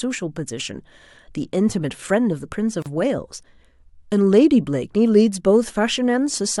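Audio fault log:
2.82–2.86 s, gap at a join of encoded pieces: the speech breaks off in a 35 ms gap, then carries on where it stopped. Two separately encoded pieces were joined untrimmed. Encoder start delay and last-frame padding remain. The codec smears the abrupt edges.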